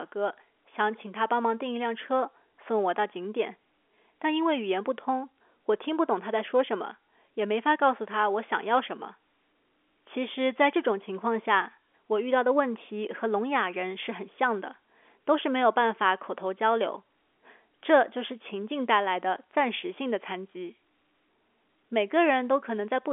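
No technical faults can be heard in the speech, which carries the narrow band of ordinary G.711 telephone coding, from 300 Hz up to 3.4 kHz with nothing above 3.6 kHz.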